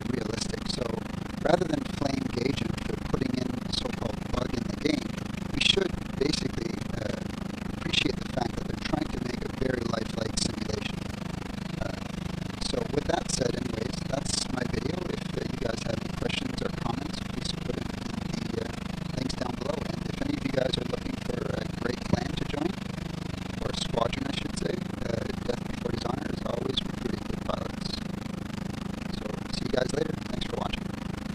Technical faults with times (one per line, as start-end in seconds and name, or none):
0.00-31.34 overlap-add ripple